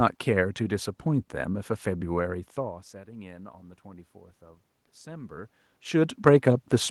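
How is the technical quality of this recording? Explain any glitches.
One technical fault stands out: automatic gain rising between 2.27 and 4.17 s. The level reaching the microphone falls by about 21 dB when the talker moves back around two and a half seconds in. The automatic gain control reacts by raising its gain by about 4 dB over nearly two seconds, so voice and room noise swell together rather than the voice alone recovering. The later level shift near 5.5 s is another change in the talker's position, not a system fault.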